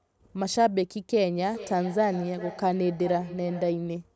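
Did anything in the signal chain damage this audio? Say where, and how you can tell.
Yes. Feedback echo between two devices, from 1.36 to 3.94 s. The speech returns about every 400 ms, roughly 15 dB down, thinner each pass. Neither device's echo canceller catches the other's playback.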